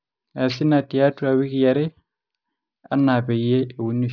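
Aliasing runs through the whole clip, from the first moment to the last. The audio was clearly dropped to a much lower rate without a low-pass filter first, which fits a change from 48 kHz down to about 11 kHz. Everything above the new 5.5 kHz limit folds back down as wrong, unrelated tones, sitting roughly 25 dB under the speech. You hear it as gritty, metallic sibilants, with the spectrum packed right up against 5.5 kHz.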